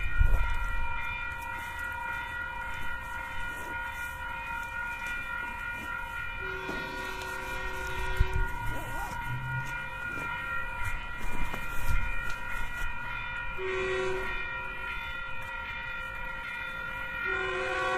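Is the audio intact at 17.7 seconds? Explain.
No. At 17.7 s the audio is inside a time-stretched section running from 14.68 s to 17.97 s. It plays at about 0.74 times its pace and drags, most likely from software repeating short pieces to lengthen it. Unlike slowed playback, the pitch doesn't drop.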